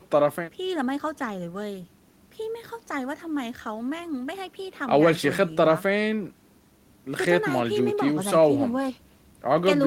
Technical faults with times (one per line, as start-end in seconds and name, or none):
none